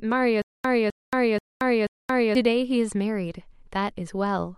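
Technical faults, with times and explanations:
0.42 to 2.35 s: stutter with silent gaps. A burst of speech about 257 ms long repeats four times, each followed by about 226 ms of digital silence, a steady 483 ms cycle. This points to a stalled stream likely replaying its last fragment before running dry, losing the speech due then. The true silence between repeats sets it apart from a seamless loop.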